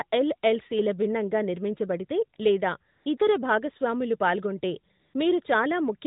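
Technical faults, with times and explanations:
2.92–3.06 s, 3.18–3.20 s and 4.99–5.14 s, AMR comfort noise: in the pauses after "ఎల్ఎల్సిల భిన్నంగా నిర్మించబడితే లేదా" and "భాగస్వాములు పాల్గొంటే", speech frames stop for 140, 20 and 140 ms. The receiver fills each gap with smooth synthetic noise built from a rough level-and-spectrum sketch, so the real background briefly switches out.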